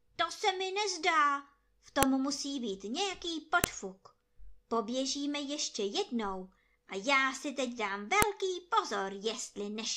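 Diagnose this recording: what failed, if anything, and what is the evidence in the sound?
The speech has a file header played as audio, so this is a storage or file-joining problem. There are three sharp, loud snaps, at 2.03 s between "se mi nezdá v" and "musí být nějaký", at 3.64 s just after "musí být nějaký", and at 8.22 s after "já si teď dám". Separate WAV pieces were stuck together with their headers left in. Those few dozen bytes get decoded as samples, giving a brief burst of garbage at each join.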